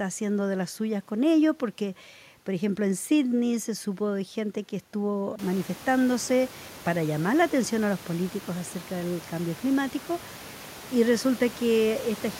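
The speech carries no technical faults; the background noise of the room rises by about 18 dB at roughly five and a half seconds in, and from then on stays about 21 dB below the speech.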